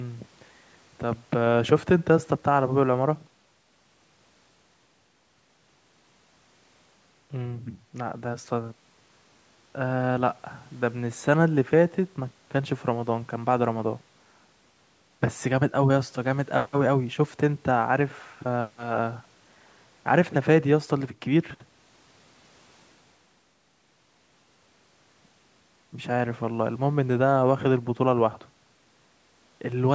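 No technical faults can be heard anywhere in this speech.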